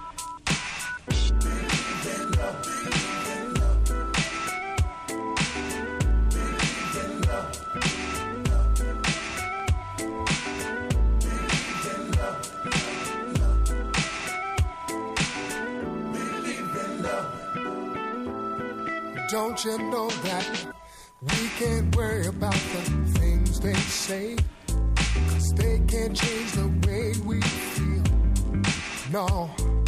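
Nothing stood out as a technical problem on listening.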